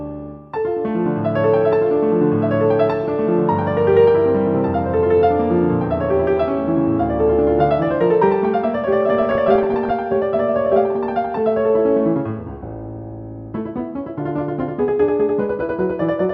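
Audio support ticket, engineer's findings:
DAB burbling, 9.16–9.91 s: burbly noise blips over the programme. Weak-signal bit errors slip past error correction into MP2 data, corrupting samples in single sub-bands. 42 frames hit.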